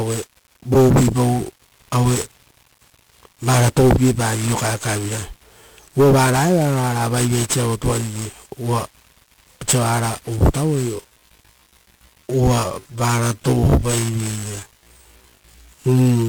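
1-bit DFPWM compression runs through the whole recording. Each sample keeps a single bit that pushes an adaptive level up or down, so heavy broadband quantisation noise fills the speech with fuzz, crackle and hiss, which fits a 48 kbps stream.

A time-stretched section runs from 10.91 s to the end, where the speech abruptly slows to 0.64 times its pace while the pitch holds. It drags, likely because software lengthened the audio by repeating short pieces of it.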